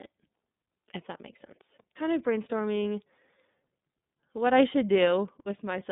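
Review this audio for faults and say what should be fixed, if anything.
The speech passed through the iLBC codec, which codes each 30 ms frame independently at a low rate consistent with its 13.33 kbps mode. Throughout, the band is held to roughly 150 Hz to 3.7 kHz, nothing reaches above 3.8 kHz, and plainly audible roughness gives it a synthetic edge. To prevent this, route the audio through a wideband codec or an uncompressed path instead of iLBC.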